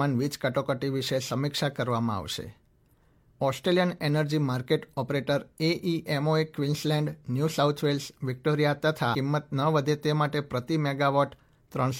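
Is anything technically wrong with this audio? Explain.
Yes. At about 9.11 to 9.15 s the speech jumps ahead abruptly with a brief blip, likely a stream segment skipped, where one chunk failed to load and playback resumed at the next. Unlike a dropout, there's no silent gap; material is simply missing.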